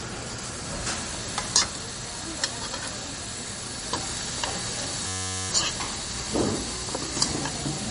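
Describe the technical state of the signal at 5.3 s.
At 5.3 s the signal is caught in a system hang loop, which runs from 5.08 to 5.49 s. The computer or its driver stalled while the sound hardware kept replaying one small ring buffer. A 10.67 ms slice repeats over and over, which fits a 512-sample buffer. At a loop rate of 93.8 Hz, it sounds like a steady buzz rather than a stutter. About 0.4 s of the real sound is lost underneath it.

The same moment also carries damage from lossy coding, likely MP3 compression at a low bitrate near 38 kbps. Nothing is heard above 10.5 kHz, so the top end is cut off flat. Weak detail flickers in and out between frames. That gives a watery, swirly texture with metallic chirps on bright, noisy sounds. Sharp attacks come out smeared. This damage is plainly audible and runs through the whole clip, including the buzz at 5.3 s.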